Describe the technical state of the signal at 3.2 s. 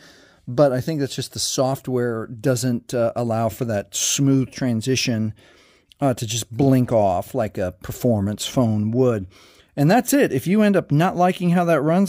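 At 3.2 s the signal is intact, with no dropout, distortion, glitch or other technical fault at that moment.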